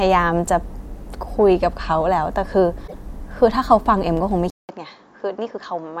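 From 2.84 to 2.95 s a short glitch cuts into the speech. This is damaged data in a compressed stream: corrupted bytes made the decoder misread frames, lose sync and jump to the next valid frame header.

At 4.50 s the speech drops out for about 0.19 s, then returns duller and a little quieter until the end, with nothing above 7.4 kHz and a faint new noise floor far beneath it. The likely cause is an input switched to a poorer device with a narrower band.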